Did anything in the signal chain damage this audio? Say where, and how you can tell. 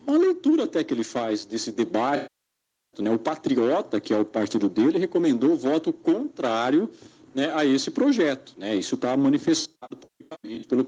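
Yes, at the codec stage, as AAC frame loss with concealment. From 2.16 to 3.01 s the sound smears, then decays toward silence and fades back in, since about 0.77 s went missing in one stretch. From 9.60 to 10.69 s the losses are scattered, about 0.68 s in total, with no gap longer than roughly 150 ms, so you get short noisy, phasey patches instead. The decoder is padding each hole from the last good spectrum and fading out when the gap runs long.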